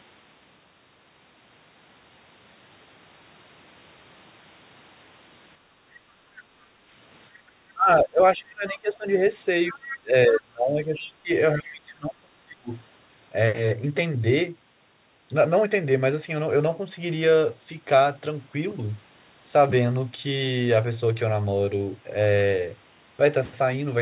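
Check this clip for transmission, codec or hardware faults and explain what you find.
Yes, there are faults, all from echo cancellation on a call heard through a G.711 telephone path that stops at 4 kHz.

Background gated by the echo canceller, 5.58 to 6.89 s and 7.31 to 7.45 s: the canceller clamped the microphone while the loudspeaker played, so the room sound dips by about 7 dB.

Speech suppressed in double talk, 7.73 to 9.06 s and 9.7 to 12.7 s: the talker's speech drops deeply, around 25 dB in places, likely because the canceller suppressed it while both sides spoke.

Other side's voice leaking through, at 8.7, 9.69 to 9.98, 11.0 to 11.09 and 11.7 s: brief scraps of a second voice surface, roughly 15 to 20 dB below the talker, likely residual loudspeaker echo the canceller missed.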